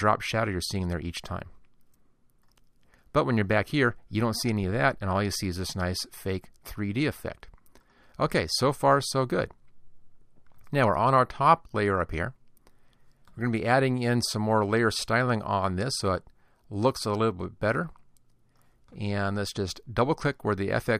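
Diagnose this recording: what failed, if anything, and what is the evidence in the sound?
Nothing failed; no faults can be heard anywhere.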